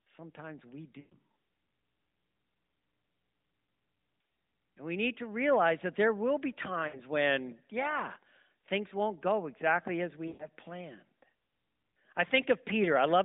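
At 1.0 to 1.17 s the sound smears into a drawn-out sound that sinks toward silence. A shorter fade follows at 6.88 to 7.0 s, between "that there will be" and "when yeah things won't", and another long fade comes at 10.28 to 10.46 s after "won't go exactly as". These are lost AMR speech frames: the narrowband decoder kept repeating its last good pitch and vocal tract settings with falling gain, which fits runs of six, three and six 20 ms frames.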